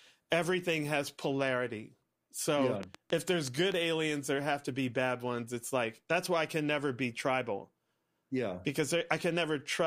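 Interference from nearby equipment or a faulty connection or power supply is the likely cause of a train of clicks in this speech recording, injecting a run of near-identical pulses from 2.83 s to 3.73 s, just before "aliens there have to". About seven clicks arrive at roughly 5.6 per second, unevenly spaced, and they peak around 10 dB above the speech. The result is a brief, irregular ticking that sits on top of the voice.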